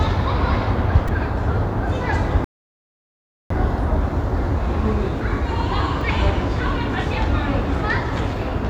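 At 1.08 s a brief buzzy click cuts into the sound: a repeated buffer, where one tiny slice of about 2.67 ms, which fits a 128-sample buffer, plays four extra times because fresh audio was late reaching the device. The hard joins between copies make the buzz.

From 2.44 s to 3.50 s the sound drops to silence, then picks up exactly where it left off. This rebuffering stall happened because the player ran out of downloaded audio and waited for more, adding about 1.06 s without losing anything.

At 6.01 s a single short click marks another repeated buffer, with the same 2.67 ms slice played once more.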